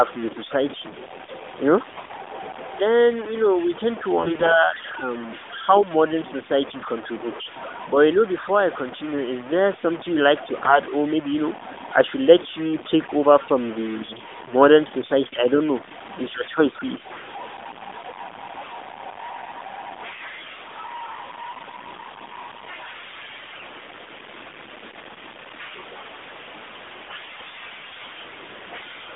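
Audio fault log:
throughout: low bit depth without dither. Grainy, rasping distortion rides on the speech and rises and falls with it. The quietest passages and word tails break into a sputtering buzz rather than fading smoothly. The likely cause is samples truncated to very few bits, about 6, with no dither, leaving error about 15 dB below the signal. Unlike steady hiss or codec warble, the grit is tied to the signal's own level.
1.92–2.16 s, 4.18–4.54 s, 10.56–10.79 s, 23.52–23.65 s, 27.02–27.17 s: AMR bit errors. In each burst the speech keeps roughly its pitch and loudness but turns hoarse, scratchy and gargly. The bursts are worst near 1.9 s, where a fairly large share of bits flipped. Flipped bits in the mobile frames misplace the excitation pulses and skew gain and spectral detail. Concealment would mute or smear a gap instead. The surrounding narrowband AMR-NB sound, limited to 200 Hz–3.6 kHz, fits its highest-rate mode.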